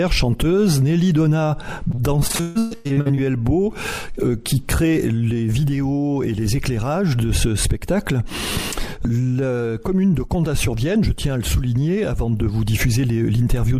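From 1.91 to 3.19 s, repeated packet loss (robotic sound): half the stretch is patched gaps up to 142 ms, giving choppy audio with pieces missing and stuttering spectrogram blocks.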